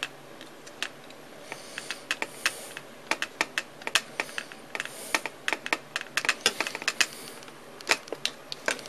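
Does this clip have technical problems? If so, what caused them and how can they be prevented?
No, there are no audible technical faults here, so nothing needs preventing.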